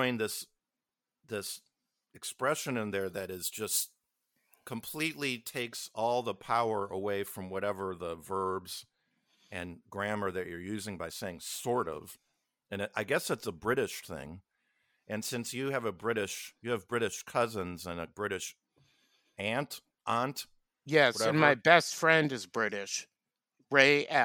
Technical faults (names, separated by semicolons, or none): pre-emphasis left on